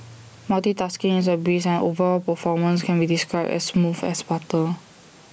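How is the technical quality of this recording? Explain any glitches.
The recording has a gain pumping fault that runs through the entire speech clip. Loud and soft parts end up closer in level, with the gain swinging around 10 dB, and the speech sounds squashed. The likely cause is gain set far too high, with a fast limiter pulling it down. On a waveform, peaks sit at a similar height. The call microphone processing leaves nothing above 8 kHz, which shows as an empty strip at the top of the spectrogram.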